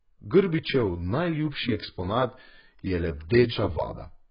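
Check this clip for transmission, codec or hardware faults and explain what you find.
The speech carries heavy codec damage for its whole length, most likely AAC compression. Nothing reaches above 5.1 kHz, so it sounds dull, and sustained sounds and sibilants have a smeared, warbling, fizzy texture. That points to a very low bitrate, around 12 kbps: the encoder quantises each frame coarsely, leaving spectral holes. The warble and fizz set it apart from a plain low-pass filter, which would only sound muffled.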